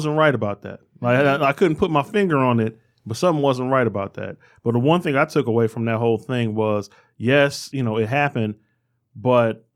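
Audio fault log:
No faults detected in the speech recording.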